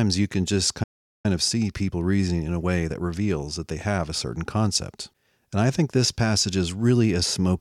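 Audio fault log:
0.83–1.26 s, playback stall: right after "you can just" the speech simply drops out for about 0.41 s, dead silence mid-phrase, then picks up again. That's the classic signature of the player starving, most likely because its buffer ran dry or its output thread got held up for a moment, so there was nothing to send to the output until it recovered.
1.26–4.26 s, time-compressed catch-up: once the sound comes back, the next three seconds run hurried, about 1.1 times normal speed, but the pitch stays put. The player is clawing back the delay the stall caused by snipping out tiny slices and cross-fading across the gaps, and that snipping is what gives it that rushed feel.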